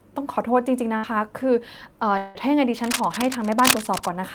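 At 0.97 s a burst of packet loss cuts into the speech. For about 60 ms the receiver stretches the last sound and fades it down, then jumps ahead, skipping roughly 60 ms. A spectrogram shows the last sound smeared out and fading into a splice.

From 2.17 to 2.38 s there is a gap, likely a long network dropout. The last sound is carried on as a decaying buzz or hiss for about 174 ms, never dropping to full silence, and about 180 ms of speech is lost. The waveform tapers, then resumes abruptly.

From 2.82 to 4.14 s, scratching and rustling roughly as loud as the speech sit over it, likely cable scratch noise from a worn connector being moved. On a spectrogram this appears as dense, irregular broadband bursts, and the waveform looks jagged.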